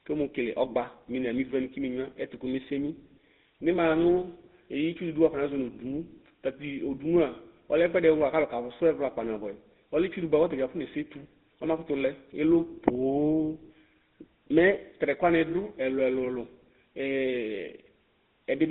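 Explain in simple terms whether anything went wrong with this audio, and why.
The speech sounds buzzy and gravelly from start to finish, as if heard over an old mobile phone call, and it lacks any crisp top end or deep bottom. This is the GSM full-rate codec at work. It rebuilds the voice from a simple model of the throat and mouth driven by evenly spaced pulses, which causes the rough buzz, and the phone line only carries roughly 200 Hz to 3.7 kHz, which makes the sound thin and muffled.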